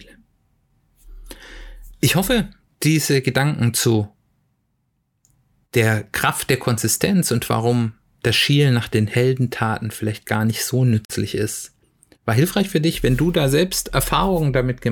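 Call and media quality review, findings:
Bluetooth dropout, 11.05–11.14 s: abrupt silent hole in the speech, which resumes further along. Likely late wireless packets discarded, consistent with a few lost frames.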